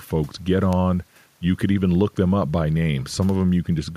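Word clock ticks run from 0.14 s to 3.88 s: about twenty sharp ticks, roughly five per second. The receiving clock isn't locked to the sender's, so each slip drops or repeats one sample. The spacing points to a mismatch of around 100 ppm.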